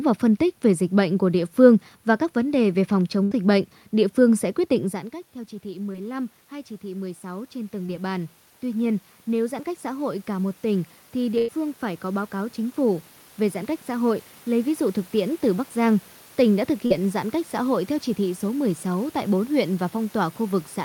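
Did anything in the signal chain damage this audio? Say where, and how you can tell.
Yes. There's a burst of packet loss on the network at 3.23–3.33 s, between "vấn đề về phòng" and "bệnh địa phương sẽ", and again at 11.38–11.50 s. The last sound gets stretched and faded, then roughly 80 and 100 ms are skipped.

Automatic gain rising in the call processing: from 5.6 s, after "giãn cách theo chỉ", to 15.7 s, voice and background swell together by about 12 dB as AGC chases an input that dropped about 15 dB.

Short concealed packet loss, also network: brief smears at 5.93–5.96 s, 7.86–7.90 s and 16.86–16.92 s, the last between "tỉnh đã thực" and "giãn cách xã hội". The receiver patched tens of milliseconds by extending the previous sound.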